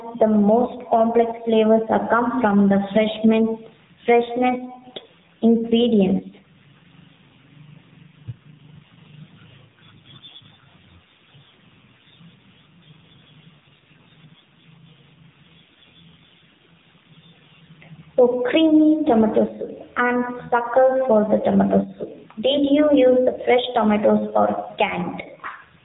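Gain pumping runs through the whole clip: the gain swings by roughly 10 dB, squashing loud and soft parts together. The likely cause is input gain set far too high, with a fast limiter clamping down on peaks.

The AMR narrowband mobile codec also affects the entire recording. Nothing above 3.8 kHz survives, so the speech sounds thin and telephone-like. The voice has a plainly audible buzzy, synthetic edge from coarse vocal-tract modelling, which points to a low mobile bitrate around 7.4 kbps.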